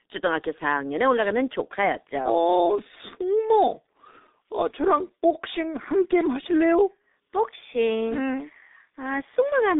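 From start to finish the speech passes through G.723.1 codec compression, heavily damaged. Everything above about 3.8 kHz is gone, and the low end thins below 250 Hz. On a spectrogram that shows as a hard ceiling with empty space above it. The coarse 30 ms frames and slow-updating voice model, consistent with a rate near 6 kbit/s, smear consonants and leave a muffled, hoarse tone, with blurred frame-to-frame texture in the spectral bands.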